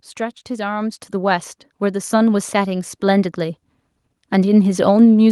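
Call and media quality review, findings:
Microphone volume stepped up at 1.02 s. Speech and background noise floor jump together by about 5 dB in a single step, no ramp. Probable component: call client's automatic input-gain control acting on the capture device. Client judged input level low and raised the device's hardware mic volume, so everything captured after that point is louder.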